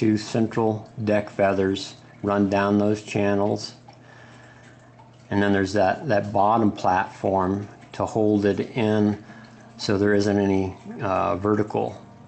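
No technical faults can be heard anywhere in the clip. It has passed through a WebRTC call path whose codec is working as designed, with the content reaching up to about 8 kHz and nothing above that, which fits Opus at around 32 kbps.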